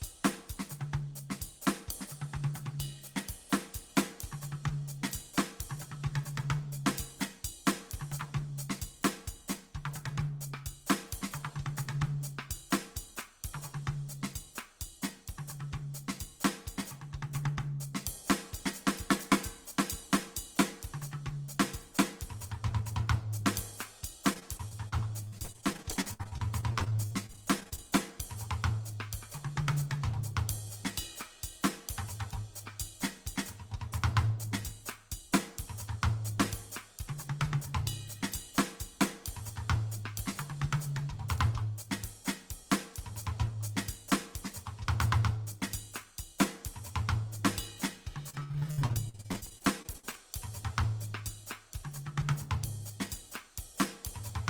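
From 24.33 to 27.84 s and 48.30 to 50.24 s, repeated packet loss (robotic sound) makes the music choppy. Gaps of up to 64 ms are patched with repeated audio, which shows as stuttering, smeared blocks on a spectrogram.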